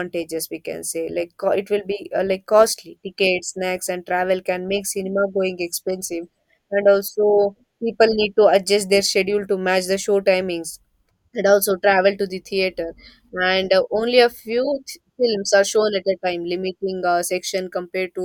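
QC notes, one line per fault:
No problems stood out on listening to this speech recording.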